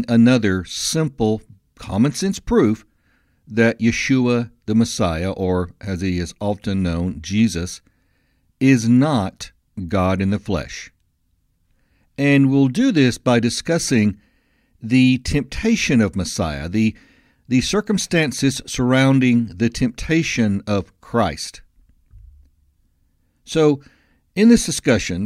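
A speech recording with nothing technically wrong in it.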